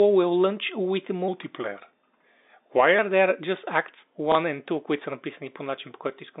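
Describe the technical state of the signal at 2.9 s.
At 2.9 s the speech sounds slowed and lowered, about two semitones deeper. This is a section at the wrong speed, running from 1.28 s to 2.99 s at 0.893 times normal speed, likely from playback clocked too slowly, with pitch and tempo falling together.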